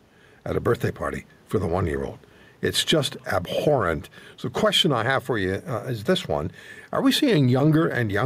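Throughout the speech, the gain pumps, with the level swinging by roughly 5 dB; the quiet room noise sits about 40 dB below the voice. This gain pumping likely comes from microphone gain set far too high, with a fast limiter clamping down on every loud syllable, which leaves the speech squashed.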